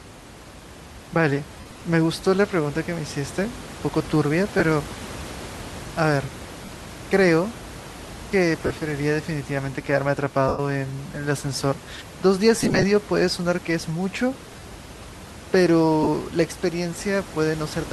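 Lost LE Audio frames break the speech at 1.60, 4.59, 6.65, 8.66, 10.48, 12.59, 14.51 and 16.03 s, hiding 22.5 to 120 ms each time. The decoder, likely LC3, refills each gap with the last spectrum with scrambled signs, which is heard as a brief noisy smear.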